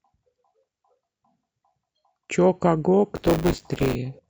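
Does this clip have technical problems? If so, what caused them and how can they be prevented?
Yes. From 3.15 to 3.95 s the speech takes on a robotic buzz at 100 Hz. This is buffer tearing. The program filling the ring buffer and the hardware reading it have drifted into each other. In every period, a small slice of the buffer still holds audio from about 20 ms earlier. Hard joins sit on both sides of it. The 100 Hz rate fits a 10 ms buffer period. Prevent it by keeping the write position safely ahead of the read position, with enough headroom that they never cross.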